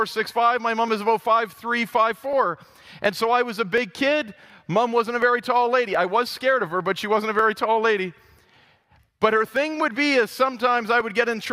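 Two devices running on independent clocks likely disagree by around 500 ppm, so the buffer between them drifts until a block of roughly 15 samples is dropped or repeated. These clock drift buffer slips sound like a regular click every 0.72 s, about fifteen times from 0.16 s to 11.0 s.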